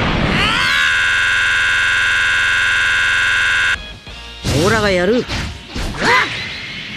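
A system hang loop runs from 0.95 to 3.75 s: the system froze while playback kept cycling one 46.4 ms buffer, likely 2048 samples, giving a 21.5 Hz stutter.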